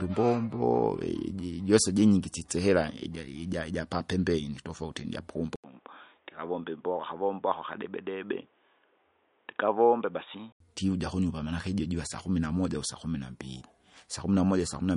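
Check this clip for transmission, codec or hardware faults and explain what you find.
Two faults here: lossy coding across the whole clip, and a stretch in the middle where the input drops to a worse device.

MP3 compression runs from start to finish, and it's plainly audible. Nothing gets through above 10.6 kHz. That hard ceiling is the encoder chopping the treble when it runs short of bits, which fits a low bitrate of around 43 kbps. It likely comes from that tight budget. Weak frequency lines get zeroed and then return frame by frame, so the speech has that watery, swirly edge, with chirpy s sounds and softened attacks.

The input switched to a poorer device from 5.56 s to 10.60 s, starting right after "ijapapembeni tofauti" and clearing just before "ndivuja kunyumba manake ijo". At the switch there's a silence of about 80 ms. After it the band stops at 3.8 kHz, so the speech turns dull and boxy, drops by about 5 dB and picks up a new noise floor roughly 40 dB below the speech. 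The likely cause is the system moving to another microphone or a headset's call profile, then switching back.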